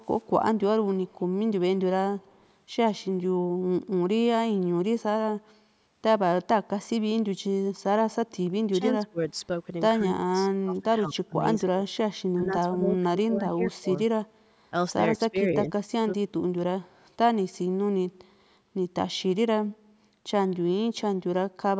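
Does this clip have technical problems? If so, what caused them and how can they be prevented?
Yes. In the first few seconds, faint scraps of delayed speech trail behind the talker at 0.14–0.21 s, 0.89–1.15 s and 2.19–2.46 s. Each arrives 187 ms after the original, at about 30 to 40 dB below the speech. This is likely an echo leak: the far side's loudspeaker output reached its microphone, and its echo canceller didn't fully remove it, so a quiet copy came back. Using a headset on the far side, or a device with stronger echo cancellation, would prevent it.

From 8.71 s onward, the talker's speech dips sharply or breaks up at 8.71–9.36 s, 10.04–11.97 s, 12.34–13.89 s, 15.18–15.37 s and 15.74–16.1 s, falling by about 20 to 30 dB at its lowest. Each dip lasts from a brief moment to about a second. This is likely speech suppressed in double talk: both sides spoke at once, and the echo canceller turned the talker down along with the echo it was trying to remove. 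Headsets and a canceller with better double-talk detection prevent this.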